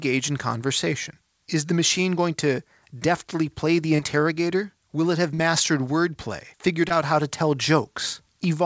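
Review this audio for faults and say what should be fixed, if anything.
Short concealed packet loss at 3.96 to 4.00 s just after "to deftly play the", at 5.34 to 5.40 s after "it have", and at 6.88 to 6.92 s just before "how to tell". In each spot a short run of call audio arrived too late for the decoder. The receiver bridged the gap by extending the preceding sound for about 26, 38 and 18 ms, then crossfaded back into the real signal. The result is a brief smear or wobble. Prevention: give the jitter buffer more headroom and add redundancy or forward error correction on the link, which here carries a band-limited call codec with nothing above 8 kHz.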